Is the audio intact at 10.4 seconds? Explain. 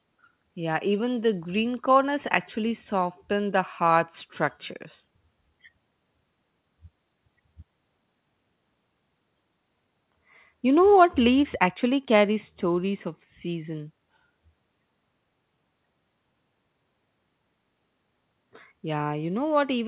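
Yes, at 10.4 s the speech is intact, with no dropout, click or distortion, just the narrow band of the G.711 call path, which carries nothing above 4 kHz.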